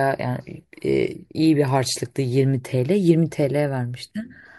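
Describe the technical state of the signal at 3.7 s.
At 3.7 s the speech signal is intact, with no dropout, distortion, noise or other fault present at that moment.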